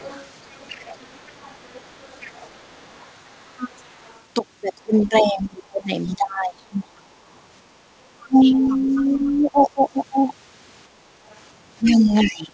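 From 0 to 4.21 s, the other side's voice leaks through faintly, about 25 dB under the speech. The echo canceller likely left part of the loudspeaker sound in the microphone signal. A short scrap of it returns from 4.8 to 5.08 s.

From 4.84 to 7.08 s, speech is suppressed in double talk. The talker's level dips by up to about 20 dB. The canceller likely could not separate the two voices, so it turned both down. Around a second and a half of speech is affected.

Leakage returns from 8.21 to 9.17 s, now about 20 dB down. Suppression overlaps it from 8.26 to 9.82 s, with dips of about 15 dB, over roughly a second.

Leakage comes back from 11.3 to 12.28 s, louder at about 15 dB under the speech. Suppression runs from 11.82 s to the end, dipping about 20 dB.

Throughout, the call path passes nothing above 8 kHz, which fits a G.722 codec at 64 kbps.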